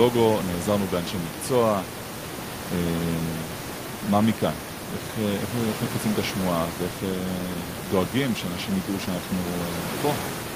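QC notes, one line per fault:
No faults heard in this speech clip, with only room noise present, sitting about 11 dB below the speech.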